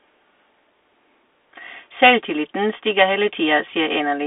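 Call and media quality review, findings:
Bluetooth CVSD headset codec throughout the speech: band squeezed to roughly 300 Hz–3.5 kHz, nothing up top, so it's boxy, phone-call sound. Plainly audible codec damage: granular hiss under the speech, scratchy s sounds, loud bright bits breaking up where the one-bit up/down delta steps can't track fast rises. Fits a 64 kbps CVSD link. Headset's running narrowband voice mode, not a wideband codec.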